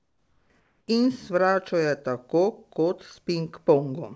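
A speech clip. From 0.00 to 0.50 s, and again from 0.60 to 0.88 s, comfort noise in place of the background is heard. The real background, already about 46 dB below the loud parts, gives way to a flat, featureless hiss. It is about 6 dB quieter in the first stretch and about 2 dB quieter in the second. The likely cause is discontinuous transmission: the sender went silent in the pauses and the receiver filled them with synthetic noise. The audio also has nothing above 8 kHz, which fits a G.722 call codec at 64 kbps.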